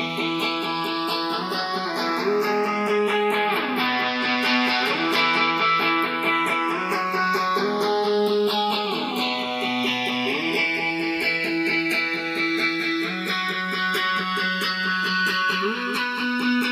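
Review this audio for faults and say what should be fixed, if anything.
Channels drifting apart throughout: separately clocked devices, roughly 70 ppm apart, slide toward a sub-millisecond offset, so the notches sweep one way, unlike a cycling flanger. Prevent it by locking both recording devices to one shared word clock.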